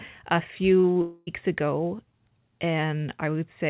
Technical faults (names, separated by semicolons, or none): short concealed packet loss; long network dropout